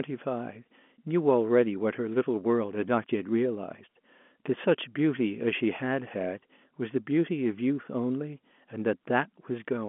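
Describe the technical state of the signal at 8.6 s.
At 8.6 s the signal is intact, carrying the narrow telephone band of an ordinary G.711 line with no fault present.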